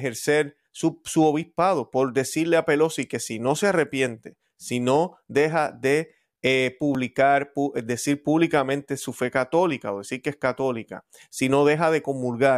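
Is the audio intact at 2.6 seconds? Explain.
Yes, at 2.6 seconds the speech plays through intact, with no audible fault at that moment.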